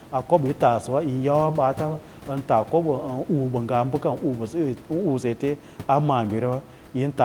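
No technical faults are audible.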